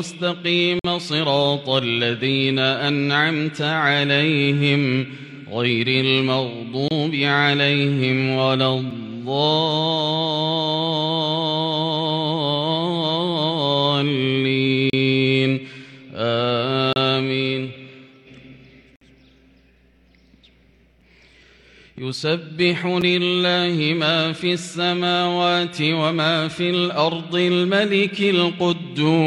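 Gaps between stream segments at 0.79–0.85, 6.88–6.91, 8.91, 14.90–14.93, 16.93–16.96, 18.96–19.01, 21.01 and 23.01 s. Hard-edged silences of 4–55 ms recur at roughly 2 s segment boundaries, where mismatched timestamps leave holes the player fills with silence. No audio is lost.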